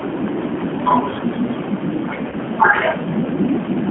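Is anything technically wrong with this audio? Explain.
Yes. Two faults are audible.

The whole clip carries G.729 codec damage, and it is plainly audible. The codec does not store the waveform. It rebuilds speech from a vocal tract filter, a pitch predictor and a few pulses per frame. The roughness and slightly synthetic edge fit its 8 kbit/s rate. The band is held between about 200 Hz and 3.4 kHz. That removes low warmth and high clarity, giving a narrow telephone sound.

From 2.30 to 2.35 s there is VoIP packet loss concealed by the speech codec. About 20 ms of audio went missing, which fits one lost packet. The decoder filled the gap by extending its last pitch and filter settings at falling gain. This produces a short stretched patch of buzzy tone or coloured noise that fades. Each frame depends on the one before, so the sound stays weak or distorted until about 2.35 s, after the missing audio ends.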